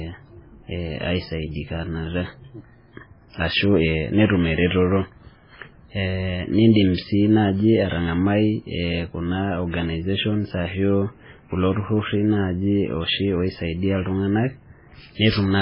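From start to finish the speech carries heavy damage consistent with MP3 compression, likely from a very low bitrate that fits something near 16 kbps. With so few bits, nothing survives above about 5.3 kHz, so s sounds turn dull and lisping, while weak frequency lines drop in and out between frames, giving a watery, swirling quality and smeared consonant attacks. On a spectrogram the energy stops at a flat ceiling near 5.3 kHz, with patchy, flickering holes beneath it.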